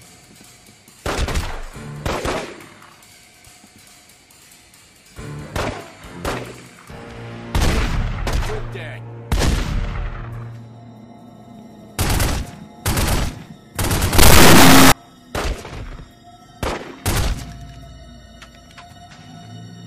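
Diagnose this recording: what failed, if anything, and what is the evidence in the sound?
From 14.19 to 14.92 s the audio turns into an extremely loud, harsh buzzing square wave, slamming between silence and the clipping limit. That is an integer read as float at the sample-format conversion stage: 32-bit integer samples interpreted as 32-bit floats, yielding near-zero or wildly over-range values.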